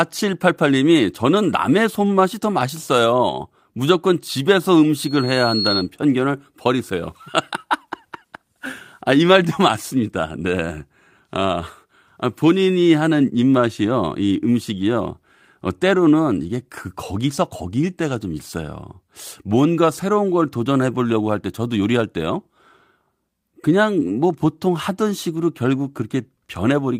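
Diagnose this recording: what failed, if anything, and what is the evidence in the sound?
The network stage dropped a packet, and the codec covered it with a lost packet rebuilt from error correction. Opus had already sent a low-bitrate copy of that frame inside the following packet, and the decoder played that copy instead of leaving a hole. At 23.71 s the speech turns briefly rougher and noisier for about 20 ms, with no silence or click. That short span points to a single lost 20 ms packet.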